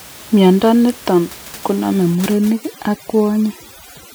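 From 2.15 s to the end, overdone noise removal kicks in: bands near the room noise get gated away, taking quiet parts of the speech with them and leaving twinkly near-silence underneath.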